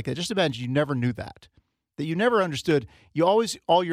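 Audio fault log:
0.50 s and 2.71 s, dropped samples: Two isolated, sharp single clicks are heard in the speech, the first right after "that just" and before "you never knew that", the second just after "that that you never". Each is instantaneous, with no missing sound. The likely cause is a tiny gap in the sample stream, well under a millisecond each, so the waveform jumps abruptly to a later value and that discontinuity produces a brief broadband tick.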